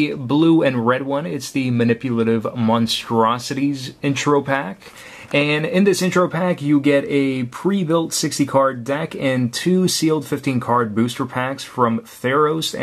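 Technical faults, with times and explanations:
No technical faults can be heard in this clip.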